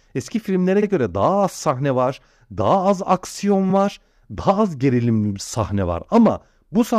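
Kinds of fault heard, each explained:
Repeated frames: compressed audio is played twice, so the speech briefly stutters, a 46 ms slice at 0.82 s (fitting two frames) and a 23 ms slice at 3.69 s after "var daha az aksiyon". Waveform and spectrogram show identical slices back to back.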